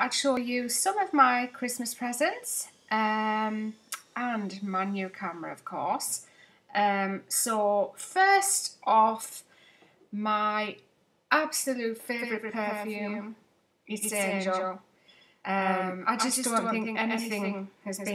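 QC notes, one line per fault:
12.19 s to end, doubled audio track: a second full-band copy enters abruptly, trailing the original by roughly 150 ms at about 5 dB lower, with no decay or room colour, likely from a slower parallel capture path mixing the same signal back in.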